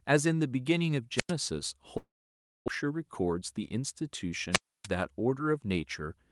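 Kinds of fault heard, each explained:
Wireless microphone squelch dropout: at 1.16 to 1.32 s and again at 4.51 to 4.88 s the radio link from the microphone weakens until the receiver's squelch gate closes, muting the output rather than letting raw static through. Each time a short swell of hiss leads into a hole of near silence, about 97 ms in the first event and a longer 290 ms or so in the second, before the speech returns when the signal recovers.
Long network dropout: from 1.97 to 2.70 s the stream stops delivering audio, most likely because packets were lost in transit. The receiver first extends the last sound it had as a fading buzzy hiss, then falls to silence for about 590 ms. When the audio resumes, roughly 600 ms of speech is simply gone, and the playback delay has shifted by around a tenth of a second.
Jitter buffer speed-up: between 2.84 and 3.75 s, right after the dropout, the receiver is holding more buffered audio than it wants, so it repeatedly trims tiny pitch-period slices out of the speech to catch up. 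Around 70 ms is cut in all, making this stretch run at about 108% speed. The pitch stays the same, but the talking sounds rushed.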